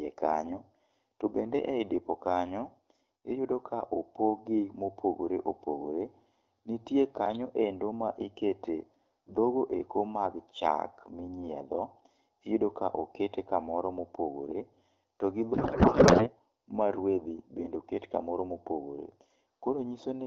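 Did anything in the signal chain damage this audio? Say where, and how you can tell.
Yes. At the codec stage, a codec payload misread, likely octet-aligned AMR read as bandwidth-efficient, turns the speech after "to gi" into garbled warble from 15.53 to 16.29 s.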